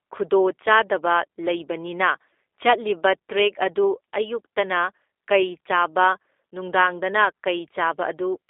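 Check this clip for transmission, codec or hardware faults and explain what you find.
One codec fault runs through the whole clip. Throughout, a G.729 codec rebuilds the speech from a vocal-tract model and sparse pulses, at a rate that fits 8 kbit/s, within a 300 Hz to 3.6 kHz line band, leaving audibly rough, synthetic, muffled speech.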